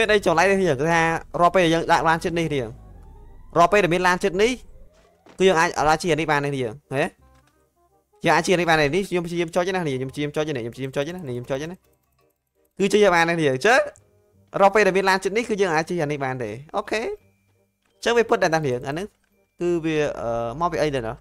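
No technical faults can be heard anywhere in this audio.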